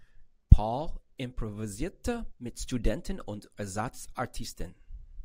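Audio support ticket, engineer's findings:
Dropped samples, likely cause: single sharp click at 3.99 s in speech. Waveform jumps ahead roughly one sample, a small fraction of a millisecond; too brief to remove audible sound, heard only as a transient.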